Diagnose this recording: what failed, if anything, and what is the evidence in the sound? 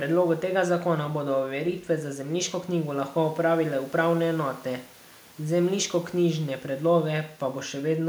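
Nothing in this speech recording points to a failure at any stage, and the only thing beyond the talking is a faint bed of room noise sitting about 32 dB below the speech, which belongs to the space the microphone was in rather than to the system.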